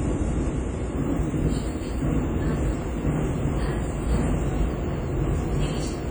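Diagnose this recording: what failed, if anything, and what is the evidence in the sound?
Codec stage: throughout the audio, transients ring and smear over tens of milliseconds, and a washy hiss swells and falls with the signal. This is heavy damage, likely from WMA compression at a low bitrate near 32 kbps. Steady analogue hiss would not track the sound, and the content still reaches about 19.6 kHz.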